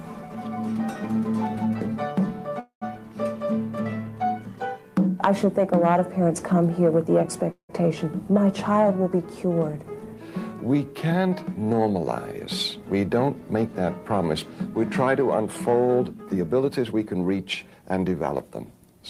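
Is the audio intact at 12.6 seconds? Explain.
No. At 12.6 seconds a jitter buffer speed-up is running, from 12.40 to 13.76 s. The receiver trims short pitch-period slices to drain excess buffered audio, cutting about 150 ms. Sound plays roughly 110% fast at unchanged pitch, so it feels hurried.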